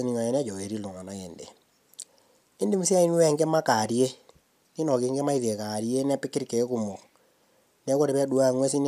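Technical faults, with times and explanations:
No technical faults can be heard in this speech.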